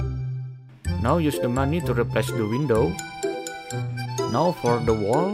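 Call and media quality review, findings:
Nothing stood out on listening; no findings to raise for this clip.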